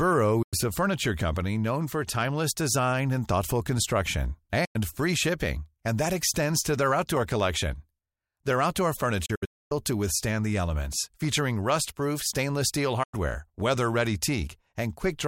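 Four digital broadcast dropouts cut into the speech, each a brief mute with a quick 8 ms fade while the receiver waits for clean frames: 0.42–0.54 s; 4.65–4.76 s, after "design and thoughtful construction"; 9.26–9.72 s, as several scattered holes (longest 256 ms) before "to withstand the elements"; and 13.03–13.14 s, after "stainless steel".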